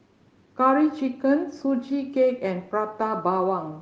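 No technical faults can be heard in the speech, so there are none to describe in time order.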